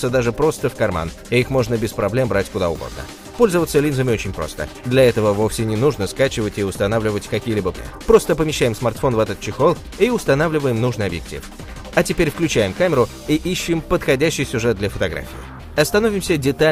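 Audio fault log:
7.77 s, skip ahead: about 0.4 s of audio never got played out. It was lost on the way or thrown out by an overfull jitter buffer while later audio sat ready, so the receiver carried on from the next available audio. Nothing fills the gap. The sound on either side of the cut is butted together almost directly, and the listener hears a sudden jump forward in the flow. The delay drops by about the same 0.4 s.
7.87 to 9.20 s, jitter buffer speed-up: the buffer was still holding more audio than its target, so the receiver worked the excess down. It cut out short pieces a pitch period or so long, again and again over about 1.3 s, removing roughly 0.1 s in total. Playback runs at about 106% of normal speed with the pitch unchanged. The passage comes across as slightly rushed, with its timing pulled tight just after the jump.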